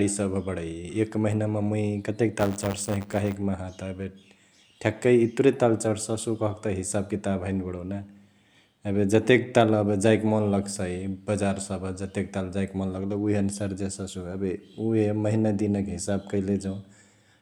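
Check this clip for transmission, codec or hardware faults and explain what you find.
One fault, buffer tearing, from 2.38 to 3.36 s. The software writing the ring buffer and the hardware reading it have slipped, so each 10 ms period contains a small slice of audio from around 20 ms earlier, hard-joined on both sides. The result is a robotic 100 Hz buzz riding on the speech.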